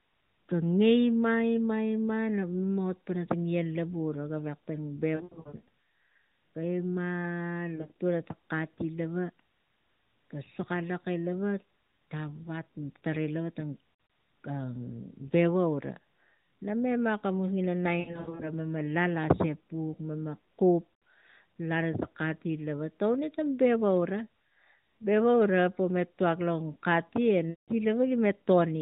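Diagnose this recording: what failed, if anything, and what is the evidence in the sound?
Lost AMR speech frames on the radio link, a network-stage failure. Speech smears, warbles and dips at 5.16–5.68, 7.76–7.92, 13.94–14.10, 18.00–18.51, 20.94–21.02 and 27.50–27.71 s. The decoder repeats the last pitch and vocal-tract settings at falling gain. Runs reach 100 ms. Speech then returns weak.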